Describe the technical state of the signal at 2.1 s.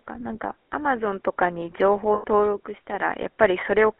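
At 2.14 s, just after the moment asked, the sound locks into a rough, metallic ring that holds until 2.24 s and then gives way. These are lost GSM frames. For those 100 ms the decoder had no good data, so it kept re-using the filter and excitation settings of the last good frame. That frozen, repeated spectrum produces the ringing. The length fits five consecutive 20 ms frames.

Around 2.1 s, and across the whole clip, the speech has a buzzy, gravelly roughness and sounds thin and boxed-in. This is the GSM full-rate codec. The speech passes only between 250 Hz and 3.5 kHz. The coder keeps a vocal-tract model and drives it with a sparse pulse train that holds one excitation sample in three, which fits the 13 kbps full-rate scheme. The damage is plainly audible.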